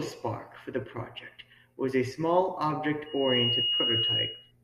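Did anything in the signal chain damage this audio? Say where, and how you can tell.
Yes. The microphone is hearing the loudspeaker it feeds, so the acoustic and analogue path has closed into a loop, and at about 2.9 kHz that loop's gain rose past one. The result is loudspeaker feedback squeal from 3.06 s to 4.52 s: a single steady tone that swells over roughly a third of a second, then sits a few decibels above the speech until the end of the event. Its fixed pitch and self-sustaining growth mark it as feedback, not noise.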